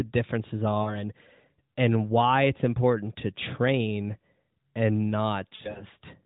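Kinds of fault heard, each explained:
Lost AMR speech frames: the decoder reuses the last good frame's settings with falling gain, so the sound is drawn out and fades at 0.82–0.98 s and 5.56–5.85 s.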